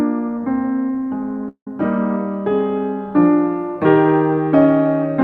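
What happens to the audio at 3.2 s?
Nothing goes wrong at 3.2 s: the music plays through that moment intact, with no audible fault.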